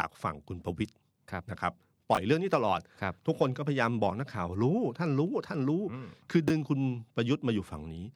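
Brief jumbled moments interrupt the speech at 2.15 to 2.17 s and 6.48 to 6.50 s. Both are chunks out of order: a chunk of about 11.6 ms plays one slot late, after the chunk meant to follow it, leaving three hard joins.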